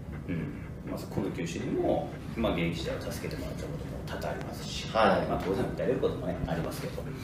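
Loud pops occur at 1.18–1.20 s, 4.41–4.44 s and 6.44–6.67 s, the last a double pop, peaking roughly 10 to 15 dB above the sound, which continues beneath each one. These sharp thumps likely come from a brief electrical pulse entering the signal chain.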